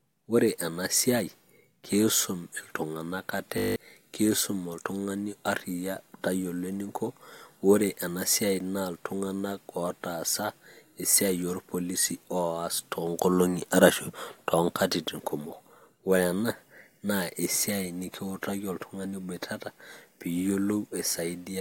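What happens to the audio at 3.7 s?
A steady 50 Hz buzz replaces the speech from 3.58 to 3.76 s. This is a system hang loop: the system froze while the audio hardware kept replaying one 20 ms slice of its ring buffer, nine times in a row, so about a fifth of a second of real speech never arrives.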